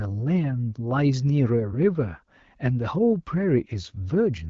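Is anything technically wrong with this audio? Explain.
No, nothing technically wrong turns up here.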